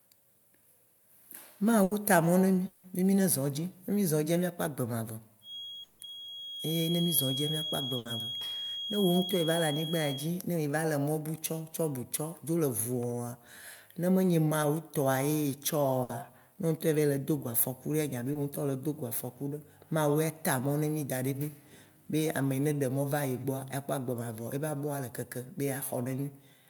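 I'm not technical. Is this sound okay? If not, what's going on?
No. There are four kinds of fault.

Burst of packet loss at 1.83, 7.97 and 16.03 s: a few data packets went missing, so the last sound is stretched into a fading buzz or hiss and then skips ahead, losing 60 to 80 ms.

Long network dropout at 2.67 to 2.85 s, just before "be mí zɔ̃ edzi", and at 5.83 to 6.01 s: the sound smears into a fading buzz or hiss for 160 ms and then jumps forward, most likely because the connection briefly stopped delivering audio.

Feedback whistle from 5.4 to 10.33 s, starting after "mía kpɔ agbe mavɔ" and ending at "ye mí va le": a thin, steady, high whistle near 3.3 kHz, swelling and fading slowly behind the speech. It is likely caused by a loudspeaker being picked up by the microphone.

Short concealed packet loss at 18.33 to 18.37 s, right after "ya be": about 20 ms went missing and was patched over, leaving a brief smear or wobble.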